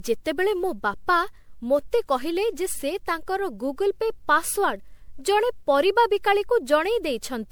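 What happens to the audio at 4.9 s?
At 4.9 s, as throughout the speech, generation loss is present, likely from about seven MP3 passes at 128 kbit/s. Each re-encode quantises on a shifted frame grid, stacking noise and spectral holes, so the sound turns swirly, hollow and smeared, with blurred attacks.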